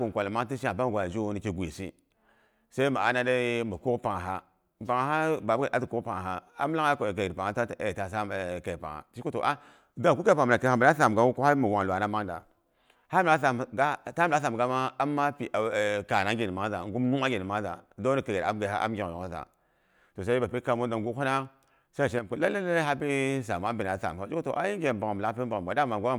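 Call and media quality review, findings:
One channel drops out, 22.19–22.30 s. Speech level falls abruptly by about 6 dB for roughly a tenth of a second, then snaps back. Likely one side of the stereo path briefly lost, so the mono sum carries only the surviving channel: content shared by both sides halves, and anything unique to the lost side vanishes. Check capture or transport for that channel.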